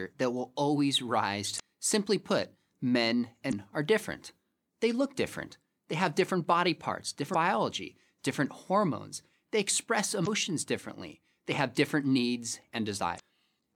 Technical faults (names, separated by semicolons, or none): damaged data in a compressed stream